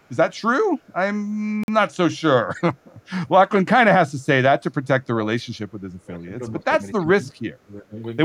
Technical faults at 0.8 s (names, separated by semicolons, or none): none